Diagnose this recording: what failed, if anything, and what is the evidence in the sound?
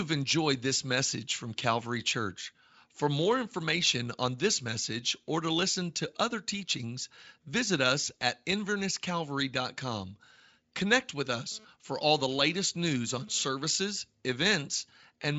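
GSM phone buzz enters at the analogue wiring from 11.52 to 13.44 s. A hard, raspy 217 Hz buzz, rich in harmonics, sits about 27 dB below the speech. It comes and goes. A nearby 2G phone's data bursts are being rectified by the audio circuit.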